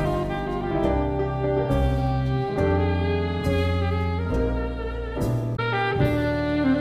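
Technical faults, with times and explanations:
5.53–5.59 s, damaged data in a compressed stream: there's a short glitch lasting about 70 ms where a bit of the encoded data got mangled, so the decoder misread those frames, lost its footing and had to hunt for the next good frame header before playback settled.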